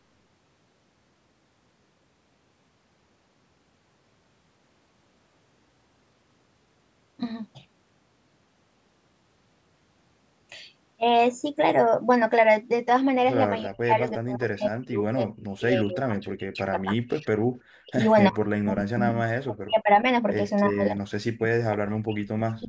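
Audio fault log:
13.65–17.31, 17.62–18.11, 18.29–18.43, 18.6–19.14, 19.31–20.05 and 20.67–22.68 s: speech suppressed in double talk. The voice sinks sharply, by about 40 dB at its deepest, and drops out in pieces. The first stretch is hollowed for around three seconds and the final one for about two. The later bursts are short gaps of 0.7 seconds or less. Both sides were likely talking at once, and the echo canceller, unable to separate this talker from loudspeaker echo, turned the near voice down.
14.62–14.68 s: echo leak. A brief, faint ghost of earlier speech surfaces about 20 dB below the voice, trailing its source by 351 ms. This is likely a loudspeaker on one side whose canceller let a fragment of its own microphone pickup escape, sending it back delayed. It falls inside the first suppressed stretch, within audio that carries nothing above 8 kHz from the call's microphone processing.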